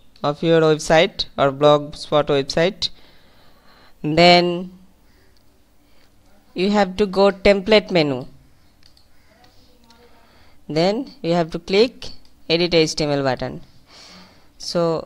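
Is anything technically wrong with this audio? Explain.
Yes, there's a wrong sample rate problem. From 4.12 s to the end, the audio is played faster than it was captured, with no rate conversion. Speed and pitch shift together: everything runs about 1.09 times too fast and sits 1.47 semitones sharp. That ratio fits 44.1 kHz material being played back at 48 kHz. You'll hear that change at 4.12 s, where the sound suddenly becomes slightly higher and more hurried.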